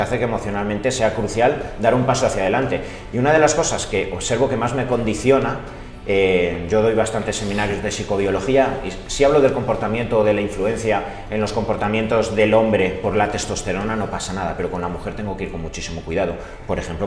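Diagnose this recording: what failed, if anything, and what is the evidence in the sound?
Nothing failed, and there's no evidence in the sound of a fault at any stage.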